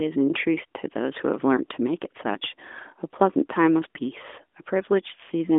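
Nothing stood out as a technical fault on listening to this speech recording.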